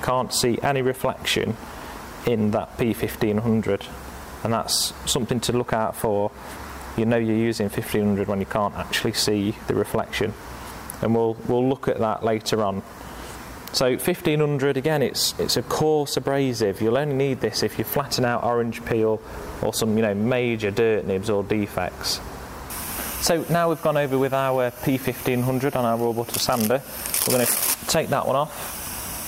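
No technical faults can be heard anywhere in this recording.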